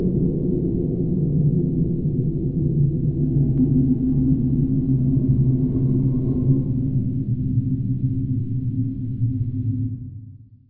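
No technical faults can be heard anywhere in this recording.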